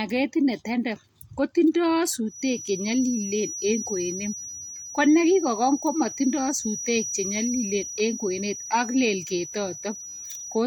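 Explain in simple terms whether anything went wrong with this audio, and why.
Feedback whistle from 2.24 s to the end: a thin 5.8 kHz tone under the speech, slowly swelling and fading, likely loudspeaker sound looping back into the microphone.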